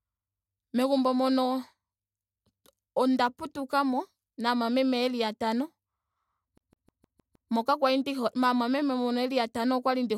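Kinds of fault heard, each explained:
CD stuck on one turn: from 6.58 to 7.51 s the speech locks into a stutter, one slice of about 156 ms replaying six times in quick succession, each pass broken by a brief mute where the read jumps back. The laser is being knocked back a track at the same point on every rotation, so it keeps returning to identical audio until it breaks free just before "moka kwali ndi hole". The result is the rapid, perfectly even repetition of a skipping disc.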